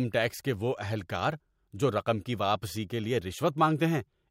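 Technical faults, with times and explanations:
No technical faults can be heard in this speech clip. Nothing in it needs a time or an explanation.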